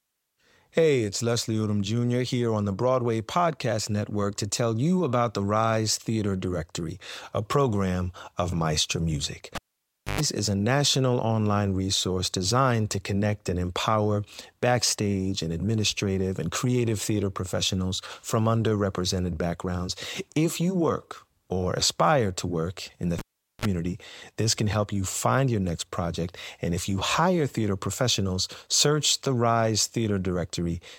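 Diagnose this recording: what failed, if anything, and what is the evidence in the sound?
Analogue wiring fault: a cable pulled and plugged in at 9.55–10.21 s and 23.19–23.65 s. Each event is a pop, then near silence while disconnected, then brief 50 Hz mains buzz as only the tip touched, then a reconnecting pop.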